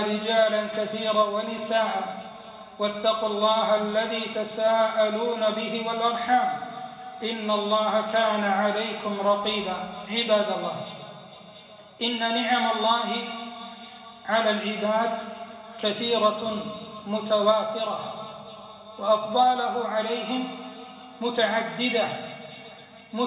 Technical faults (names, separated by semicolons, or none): none